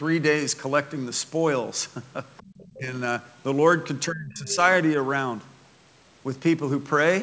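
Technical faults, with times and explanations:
2.37 to 2.66 s and 4.49 to 4.56 s, other side's voice leaking through: a second, fainter voice sits under the talker in both spots. It's the far end playing on the loudspeaker and getting picked up by the mic, likely because the echo canceller didn't fully remove it. The first scrap is very quiet, around 30 dB down. The second is brief but much more obvious, around 15 dB under the talker.
2.43 to 2.5 s, background gated by the echo canceller: the room tone suddenly dips, about 22 dB at its deepest, for roughly 70 ms, then comes straight back. That's the canceller clamping the mic while the loudspeaker is active and letting go a moment later. It lands right inside the first leak, so you hear the ambience vanish and return while the faint second voice is still there.
2.78 to 2.94 s and 4.07 to 4.58 s, speech suppressed in double talk: the talker's own voice gets pushed down while the other side is talking. 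The first dip is mild, around 10 dB over roughly 150 ms. The second is heavy, around 25 dB across about half a second, and it overlaps the louder leak at 4.49 s. Both are likely the canceller failing to tell the near talker from the echo and ducking everything.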